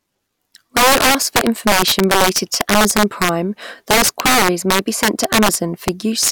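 Throughout the speech, integer overflow pushes loud peaks about 9 dB past the integer limit, so a few percent of samples wrap to the opposite sign, producing violent cracks. The waveform shows spikes flipping sign; the spectrogram shows broadband vertical streaks.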